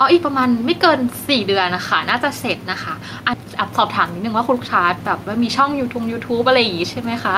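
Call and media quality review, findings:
Gain pumping, whole clip: level swinging roughly 5 dB, with room noise sitting about 31 dB under the speech. Likely cause is input gain set too high, with a fast limiter or compressor pulling level down on every peak.

Skip ahead at 3.33–3.35 s: playback jumps forward with no fill. Around 0.7 s of speech is missing, and the two sides are butted together almost directly. This points to the jitter buffer discarding queued audio on overflow, cutting delay by roughly 0.7 s.

Jitter buffer speed-up, 3.43–3.69 s: speech runs at 111% with pitch unchanged and sounds hurried. The receiver is trimming repeated pitch-period slices, about 40 ms in total, to drain excess buffered audio.

Jitter buffer speed-up, 4.18–7.07 s: a longer stretch at 108%, again at unchanged pitch, with a steadily rushed delivery. About 0.3 s is trimmed in small pitch-period cuts as the buffer works back toward its target depth.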